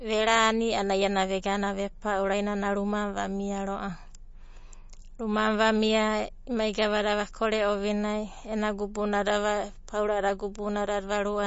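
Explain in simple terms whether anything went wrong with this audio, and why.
The audio was most likely squeezed hard by MP3 compression, which saves space by throwing away the parts of the sound the encoder judges least noticeable. Here it threw away a lot, throughout the whole speech clip. Nothing above about 7.5 kHz survives, so the top end sounds dull and muffled, and the thin remaining detail flickers in and out, giving a watery, swirly quality, with metallic chirps on hissy sounds like s.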